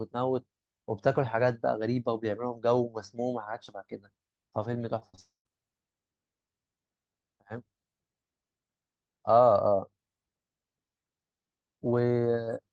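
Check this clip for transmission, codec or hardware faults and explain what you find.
The clip has two kinds of transmission fault, both from packets failing to reach the receiver in time, clustered just after 5 s of this speech recording.

Short concealed packet loss occurs three times in quick succession: 4.99 to 5.03 s, 5.09 to 5.15 s, and 5.15 to 5.19 s. Packets covering about 20 ms, 40 ms and 20 ms of audio arrived too late for the decoder, so the receiver extended the preceding sound to fill each gap before rejoining real audio. These patches sound like brief smears or wobbles, and a short sound inside one can disappear.

A long network dropout follows immediately, from 5.19 to 5.47 s. Roughly a quarter of a second of audio is lost, most likely because no packets arrived at all. The concealer first carries the last sound forward as a fading buzz or hiss, then gives way to about 150 ms of near silence. 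The audio resumes at 5.47 s with the missing part gone rather than delayed. In the Opus-coded call audio around these faults, the band extends to about 12 kHz.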